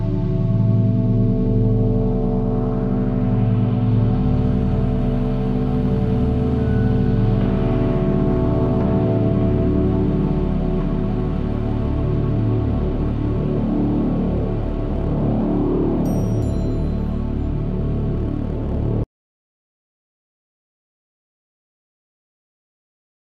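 At 19.04 s the sound cuts out mid-flow into dead digital silence with no room tone, an audio dropout to silence lasting the final 4.3 s, likely a lost input.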